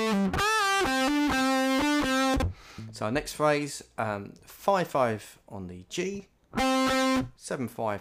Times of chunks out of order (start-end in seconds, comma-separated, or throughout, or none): 2.34-2.42